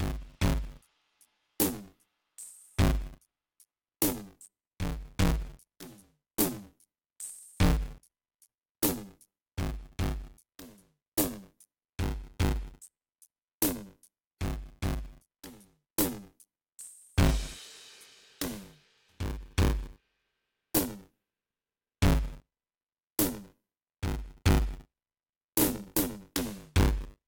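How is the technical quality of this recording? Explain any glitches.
The technical quality is poor: a steady buzzing rattle runs under the music from start to finish.

Buffer tearing, throughout the clip: the software filling the playback ring buffer and the hardware draining it have drifted out of step and cross inside every period. About a fifth of each buffer therefore holds music from roughly 20 ms earlier, butted against the current audio with hard joins on both sides. Those joins repeat at 100 Hz, producing a robotic buzz that rides on the music and falls silent only when the signal does.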